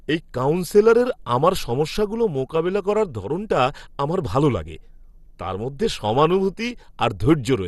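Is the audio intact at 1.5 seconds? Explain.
No. At 1.5 seconds, as throughout the speech, the sound is dull, gurgly and granular with nothing above 12.2 kHz, likely from MP2 compression at a rate that fits 64 kbps. Starved upper sub-bands switch off and the remaining bands are coarsely quantised. A spectrogram would show a hard ceiling and flickering blocks of upper bands.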